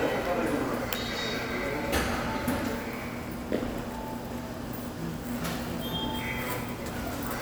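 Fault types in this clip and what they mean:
No faults can be heard anywhere in this audio.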